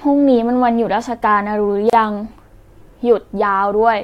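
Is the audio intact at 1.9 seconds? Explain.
No. From 1.90 to 1.93 s a 32 ms gap at a join of encoded pieces opens: leftover encoder delay and padding. Unlike a dropout, speech resumes exactly where it stopped.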